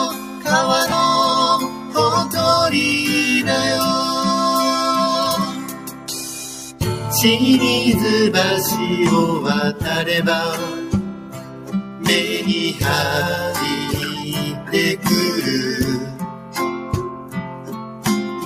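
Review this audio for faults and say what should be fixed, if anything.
A noise suppressor designed for speech was left active on material that isn't speech. It treats steady tones, ambience and reverberant tails as noise and turns them down, swinging gain by around 10 dB. Attacks pass through, but sustained sound and decays sink behind them, so the whole clip pumps and thins rather than holding an even level. Prevention: bypass speech-oriented noise suppression whenever the source is music or general sound.

The same suppressor cuts specific passages harder than the rest, by about 7 dB at the deepest. This happens at 0.11–0.46 s, 1.65–1.95 s, 5.46–6.08 s, 11.11–12.06 s, 14.51–14.73 s, 16.02–16.55 s and 17.1–18.05 s, with a shallower dip of about 5 dB at 14.14–14.3 s. In each stretch, held or fading sound drops away and tails end early, while sudden onsets survive. The longest cuts, near 11 s and 17 s, last about a second. 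Prevention: disable the suppressor or switch it to a music mode so sustained content isn't classed as noise.

Lost LE Audio frames interrupt the Bluetooth stream at 0.90–0.92 s. The dropout lasts about 22.5 ms, which fits three missing LC3 frames. The decoder covers the gap by repeating the last spectrum with randomised phase, so for that instant any tonal content turns into a brief noisy smear before the signal resumes. Prevention: improve the radio link, with a shorter distance, less interference or a more robust connection setting, so frames arrive intact.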